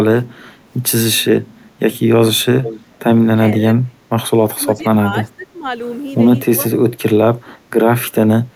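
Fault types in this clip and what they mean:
Echo leak: a copy of the speech returns 457 ms late, about 10 dB below the speech, likely from incomplete echo cancellation; a spectrogram shows a weaker, time-shifted repeat.
Speech suppressed in double talk: speech drops twice, once deeply and briefly, then more mildly for longer, likely from canceller ducking; the waveform envelope caves in.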